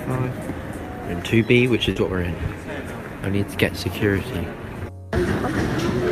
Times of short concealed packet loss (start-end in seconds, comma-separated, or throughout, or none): 1.91-1.98